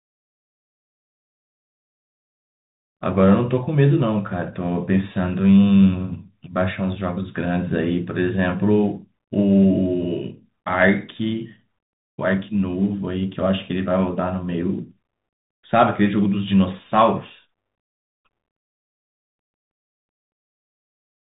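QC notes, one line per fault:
throughout Bluetooth CVSD headset codec: muffled, narrowband speech capped at 3.8 kHz, with scratchy s sounds and granular hiss from coarse one-bit up-down sampling.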